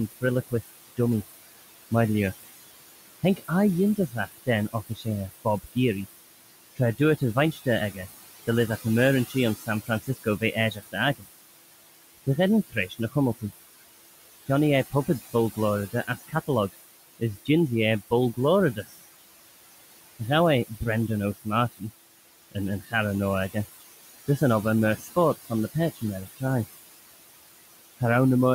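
Throughout the recording, overdone noise removal is at work: the reduction is set far too hard, so individual frequency bands near the noise estimate are pushed almost to nothing, leaving near-silent gaps flecked with twinkling specks. The same noise suppressor artifacts show in its frame-by-frame gating. The room noise, sitting about 12 dB below the speech, is cut by about 19 dB between phrases, then swells back beneath them.

Speech cut by the noise suppressor happens repeatedly, as parts of the voice are mistaken for noise and dropped by about 19 to 21 dB. This occurs at 0.12 to 0.99 s, 3.36 to 5.76 s, 6.76 to 11.27 s, 12.68 to 13.43 s, 14.46 to 18.94 s and 20.19 to 26.42 s. Within each span, the affected speech sounds swallowed or faint. The losses total under a second in most spans and about a second between 6.76 and 11.27 s.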